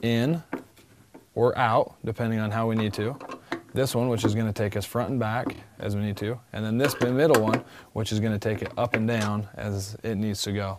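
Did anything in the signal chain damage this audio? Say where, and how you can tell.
Yes. Repeated frames at the codec or storage stage: one 26.1 ms compressed block replays twice at 5.53 s, heard as a stutter adding 52 ms.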